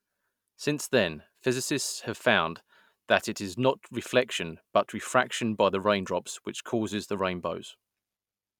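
No technical faults are audible anywhere in the recording.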